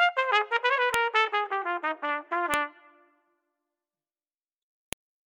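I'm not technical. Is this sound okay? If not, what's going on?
No. A file header played as audio causes sharp clicks at 0.94, 2.54 and 4.93 seconds: separate pieces were joined with their start-of-file data left in, which plays as sound.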